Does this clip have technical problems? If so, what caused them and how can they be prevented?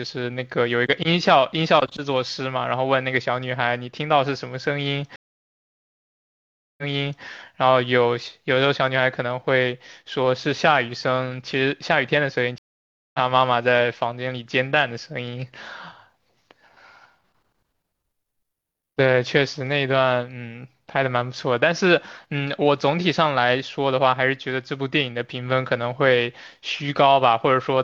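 Yes, two stream reconnects: at 5.16–7.24 s a 1.6 s silence ends with the speech resuming 0.46 s earlier, repeating material; at 12.58–13.19 s a 0.56 s gap resumes roughly 0.4 s later, skipping some. A plain dropout would continue from where it stopped. A larger client buffer with seamless reconnection logic would prevent this.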